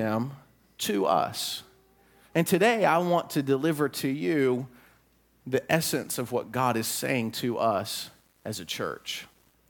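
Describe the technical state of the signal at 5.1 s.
At 5.1 s the speech signal is intact, with no audible technical fault at that moment.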